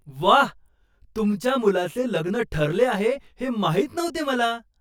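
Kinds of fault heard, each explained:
Channel delay (comb filtering): one side of the speech arrives around 20 ms behind the other, so once they're folded to mono, shared content cancels at evenly spaced frequencies, starting down near 30 Hz. That gives the whole clip a rough, slightly doubled sound.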